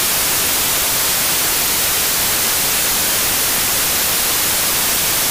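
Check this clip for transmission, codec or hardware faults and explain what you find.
There is one fault, present for the whole clip: samples built from the wrong bytes. The reader assembles each sample from its bytes in the wrong order or alignment, so the rapidly changing low-order bits land in the most significant position. The result is loud, harsh broadband noise throughout.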